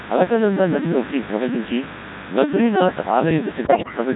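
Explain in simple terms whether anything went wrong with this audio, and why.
Three things went wrong, and you can hear all of them.

First, mains buzz runs through the whole clip. Electrical spikes from the power supply leaked into the audio, repeating with the 50 Hz mains. The result is a steady, raspy buzz under the speech, quite loud compared with the voice.

Second, the speech went through the Codec 2 vocoder, a very low-rate codec for digital radio. It does not keep the real sound wave. It sends only a rough outline of pitch, loudness and tone, then rebuilds a voice from that. Here the damage is heavy, so the voice sounds robotic and buzzy.

Third, from about 3.64 to 3.97 s there are bit errors on digital voice radio. Part of the data arrived corrupted, as happens at the edge of radio coverage. Each corrupted piece sets the pitch, loudness or tone of a short slice of sound. So across several slices the voice jumps around and breaks into warbles, bleeps and gibberish.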